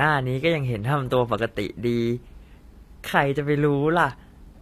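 Throughout, the speech likely passed through HE-AAC compression at a low bitrate, perhaps 24 kbps. The rebuilt treble makes s sounds gritty, and nothing remains above 14.9 kHz.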